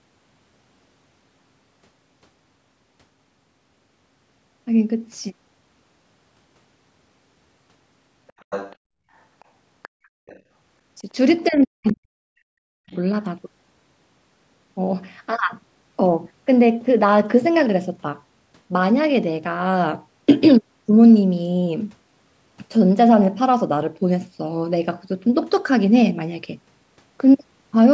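From 8.27 to 8.76 s a second, fainter voice can be heard under the speech, about 15 dB down. Shorter scraps follow at 9.40 to 9.45, 9.82 to 9.89 and 10.27 to 10.40 s, roughly 25 to 40 dB down. This is the other side's voice leaking through, likely loudspeaker playback that the echo canceller failed to remove from the microphone.

From 11.48 to 12.57 s the speech drops away by as much as about 40 dB for roughly a second, while another brief scrap of the far voice appears at 11.87 to 11.93 s. A second, shorter dip follows at 12.77 to 12.91 s. This is speech suppressed in double talk, likely the echo canceller turning down the near talker along with the echo because both sides were speaking at once.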